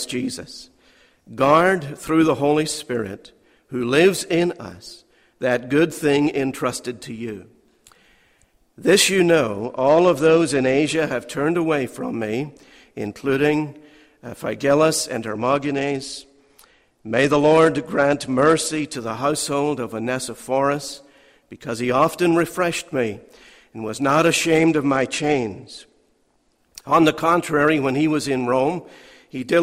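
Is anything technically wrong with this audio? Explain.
Yes. A Bluetooth SBC bit pool drop occurs three times, at 9.60 to 10.95 s, 15.29 to 18.94 s and 24.58 to 26.58 s. Each time the link appears to run short of bandwidth. The encoder's bit budget falls sharply, which fits a bit pool dropping from 31 to 13, or roughly 94 kbps. The highest sub-bands starve and the rest are coarsely quantised, so the treble turns dull and a gritty noise rises. Unlike packet loss, the sound never gaps, and full clarity returns each time.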